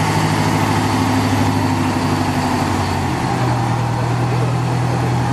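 No technical faults can be heard anywhere in this recording.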